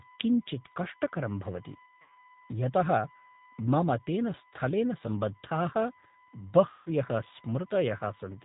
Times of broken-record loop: none

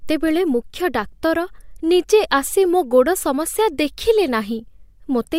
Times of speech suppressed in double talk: none

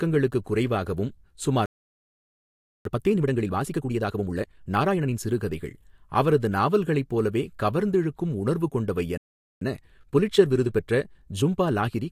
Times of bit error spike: none

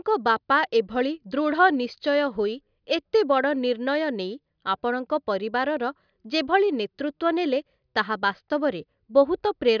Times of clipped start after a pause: none

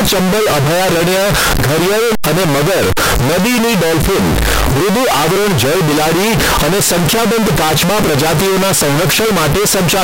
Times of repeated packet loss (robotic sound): none

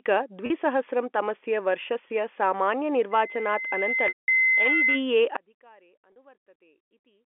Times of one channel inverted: 5.37-7.39

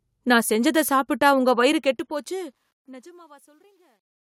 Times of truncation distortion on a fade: 1.69-4.23

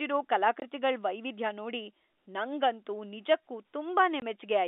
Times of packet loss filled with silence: 0.60-0.62, 4.20

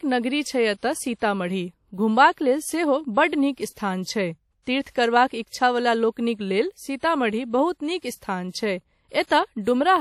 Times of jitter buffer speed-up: none

